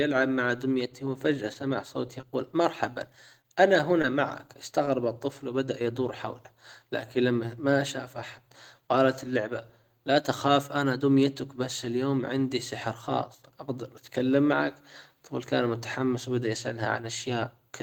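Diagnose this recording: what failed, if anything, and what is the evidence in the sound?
The network stage failed: scattered short gaps between 1.53 s and 5.83 s. The speech there picks up about seven brief ticks and smears, none longer than roughly 20 ms, covering around 3 percent of that stretch. Lost or late packets left holes, and the receiver bridged each by extending the preceding sound. About 80 ms went missing and 16 ms was added. Because each hole is filled rather than dropped to silence, it is packet loss concealment, not a converter or buffer dropout.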